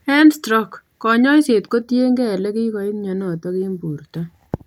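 From 1.82 to 4.05 s, just after "stroke konyoiset", the speech shows channel delay (comb filtering): one channel runs about a fifth of a millisecond late before the mix to mono. Cancellation carves evenly spaced notches starting around 3 kHz, leaving the sound hollow and phasey.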